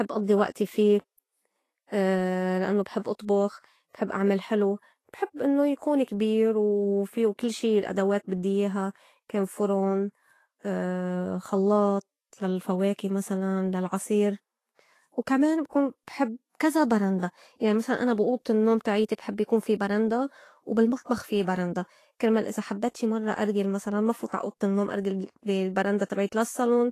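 Throughout the speech, coarse treble quantisation leaves a hissy, grainy texture and nothing above 14.2 kHz, likely Vorbis compression at a bitrate around 33 kbps. From 24.27 to 24.32 s, pre-echo spreads a brief hiss about 57 ms ahead of a sharp onset, because codec noise fills the whole transform block.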